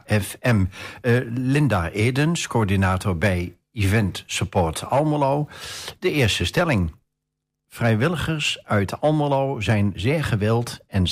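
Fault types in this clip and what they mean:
No faults can be heard.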